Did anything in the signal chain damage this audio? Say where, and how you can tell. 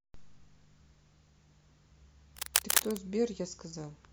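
Yes: cable scratch noise from 2.37 to 3.04 s, a few dB above the speech, likely a worn analogue cable or connector; dense uneven rustling, not sparse isolated clicks.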